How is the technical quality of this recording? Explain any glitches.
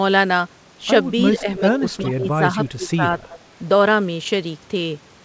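The recording has two clear problems: the talker is pushed down twice in the first part of the clip, and a short echo appears shortly after. The band stops at 8 kHz, which fits a wideband call codec such as G.722.

Speech suppressed in double talk, 1.31 to 2.58 s and 2.76 to 3.16 s: the voice sinks by about 15 dB in the first stretch, across roughly two-thirds of a second in total, and by about 20 dB over the second, with the level pumping down and back. The likely cause is the far side talking at the same moment. The echo canceller couldn't tell its own talker from loudspeaker echo and attenuated everything it picked up.

Echo leak, 3.3 to 3.36 s: a brief, faint copy of the speech comes back about 375 ms late, sitting about 20 dB under the live voice, heard as a quick ghostly scrap. This is likely speech played on the other end's loudspeaker, reaching its microphone and escaping that end's echo cancellation before being returned down the line.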